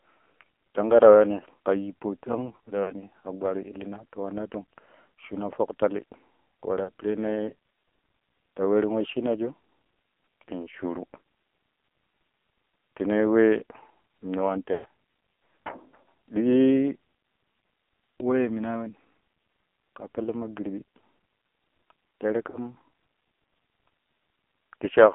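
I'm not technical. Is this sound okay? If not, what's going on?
No. The whole recording has passed through the AMR narrowband mobile codec, the old phone-network speech coder, squeezed hard. Only sound between about 250 Hz and 3.4 kHz survives, so the voice is thin and muffled, with a heavy buzzy, synthetic edge.

There are also lost AMR speech frames, where chunks of the phone signal failed to arrive and the decoder filled the gap by stretching the previous sound while fading it. Brief warbles or dips occur at 2.84–2.93 s, 6.84–6.90 s, 20.24–20.29 s and 22.50–22.73 s. The longest dropout, at 14.74–14.86 s, sounds drawn out and fades before the voice returns.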